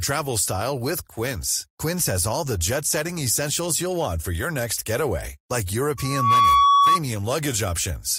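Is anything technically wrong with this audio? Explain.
Yes, there's loudspeaker feedback squeal from 5.97 to 7.00 s, right after "your next getaway like": the mic-speaker loop runs away at 1.1 kHz, swelling within half a second to a tone about 10 dB over the speech.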